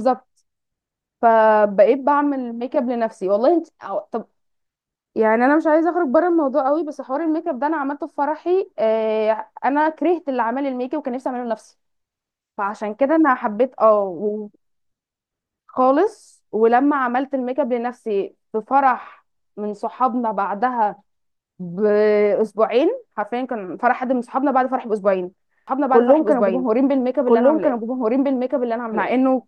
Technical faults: doubled audio track

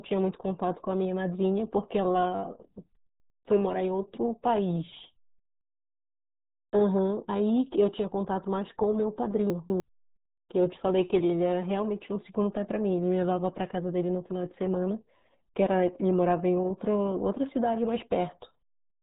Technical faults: RealAudio 14.4 codec; chunks out of order

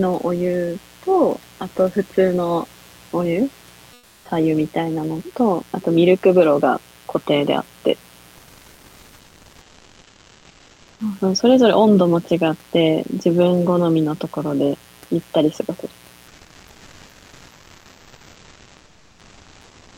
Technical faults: mains buzz; comfort noise in place of the background

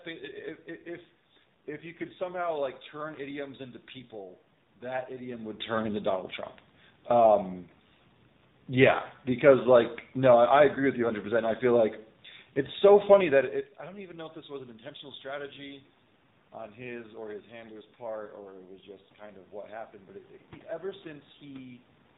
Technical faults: AMR narrowband mobile codec

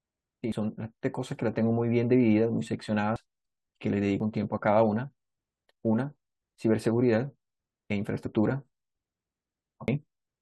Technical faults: dropped buffer (overrun); damaged data in a compressed stream

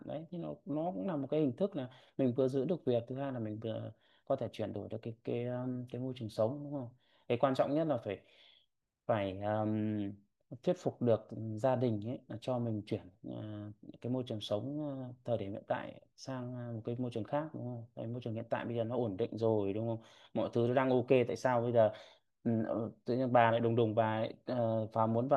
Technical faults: none

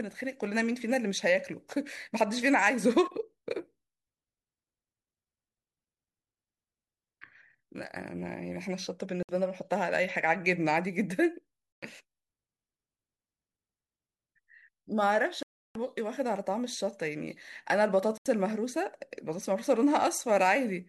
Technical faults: Bluetooth dropout

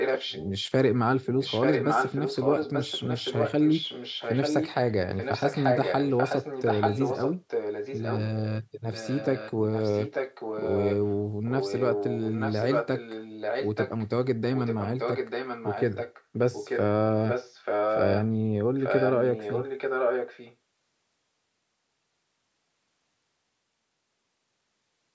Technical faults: echo leak

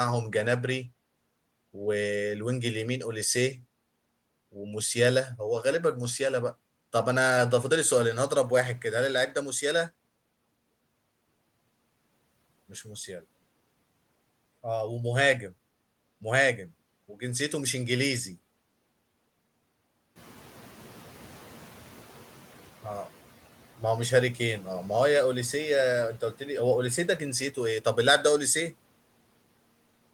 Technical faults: noise suppressor catching up

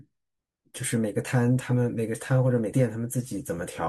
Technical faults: compressed frames skipped

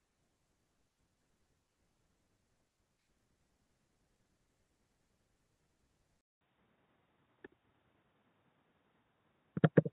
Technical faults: input switched to a poorer device

